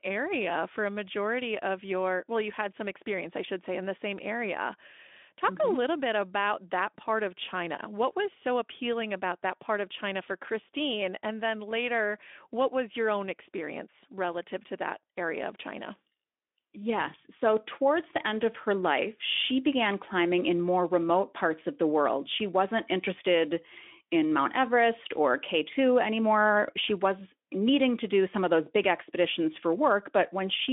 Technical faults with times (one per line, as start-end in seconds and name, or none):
none